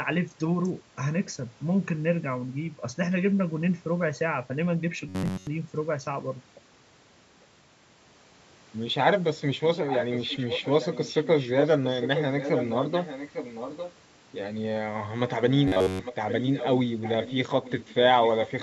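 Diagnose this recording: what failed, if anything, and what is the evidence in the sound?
Robotic sound from repeated short buffers at 5.09–5.47 s and 15.68–16.00 s: a rigid, metallic buzz at 93.8 Hz is heard. That points to the driver or buffer stage, likely starved, replaying a segment of about 10.7 ms. Most audio is lost in the first burst, all of it in the second. A codec artefact would warble rather than hold one pitch.

Echo leak at 9.87–11.70, 12.01–13.93, 15.52–16.77, 17.02–17.34, 17.50–17.95 and 18.23–18.62 s: a repeated copy trails the speech by 851 ms at about 10 dB down, falling to about 15 and 20 dB down in two stretches. That fixed, long delay separates it from room reverberation. The cause is likely an incomplete echo canceller at the far end during call processing.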